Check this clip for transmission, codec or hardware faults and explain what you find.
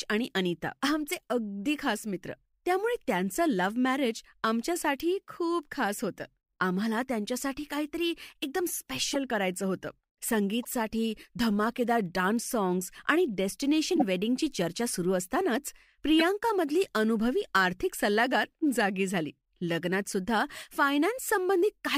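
A corrupt frame decoded fault recurs in this speech clip: the decoder received compressed frames with flipped bits and played them anyway. It happens at 5.00 s, 9.14–9.16 s, 10.63–10.71 s, 13.96–14.03 s and 16.19–16.22 s. Each event touches a handful of frames, and the misread codes throw energy into the wrong frequencies. The result is brief chirps and noise blips that peak at roughly −35 dBFS for the faintest and −15 dBFS for the loudest.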